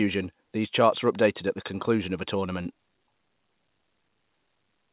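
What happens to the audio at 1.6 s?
Nothing goes wrong at 1.6 s: the speech continues intact through that moment, carried by the telephone-band call path with its usual ceiling of about 4 kHz.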